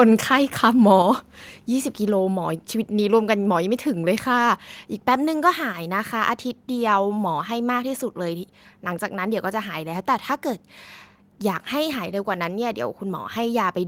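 At 1.02 s the speech and the background beneath it drop together by about 5 dB in a single step and stay at the lower level. This is likely a microphone volume stepped down by the call software, which cut the device's input volume at once. The change is one abrupt step rather than a gradual compressor or AGC ride, and the room noise falls with the speech, so the speaker did not simply move away from the microphone.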